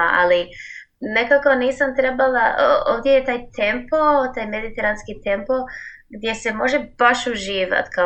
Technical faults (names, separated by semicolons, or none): none